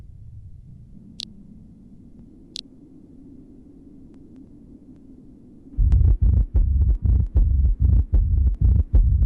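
No technical faults are audible anywhere in the recording.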